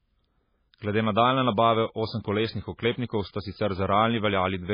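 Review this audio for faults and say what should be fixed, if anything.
The whole clip is dull, with nothing above 5 kHz, and the speech sounds watery and smeared. This is likely heavy MP3 compression, which fits a bitrate near 16 kbps. Encode from the original at a much higher bitrate.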